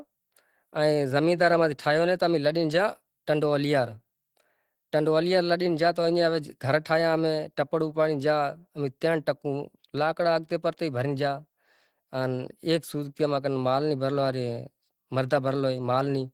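Throughout, the speech sounds hoarse, grainy and muffled. That points to Opus compression, likely near 16 kbps in its hybrid speech mode.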